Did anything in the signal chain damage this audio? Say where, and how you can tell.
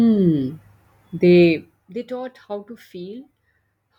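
Yes. From 1.42 to 1.97 s a fine ticking, zipper noise, rides on the speech as the level falls by about 15 dB. The cause is in the buffer stage: gain is updated about 50 times a second without smoothing, each jump clicking.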